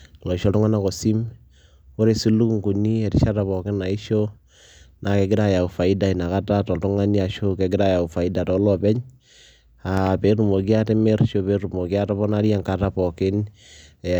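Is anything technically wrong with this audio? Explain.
Yes, there is one fault. From 9.97 to 10.09 s a loud pop occurs, two sharp pops well above the speech, which continues underneath. A voltage spike, likely from a plug or switch, caused it.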